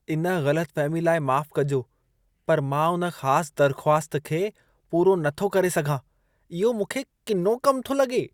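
No technical faults can be heard anywhere in this speech recording. The sound runs continuously, with no event worth marking at any point on the timeline.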